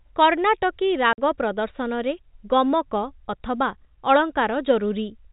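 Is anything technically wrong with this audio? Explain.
Yes. From 1.13 to 1.18 s there is packet loss filled with silence: a 50 ms hole, which fits five consecutive 10 ms packets, where the receiver had nothing to play and output zeros. The speech stops dead, with abrupt edges. The telephone-band G.711 coding is audible as nothing above 4 kHz.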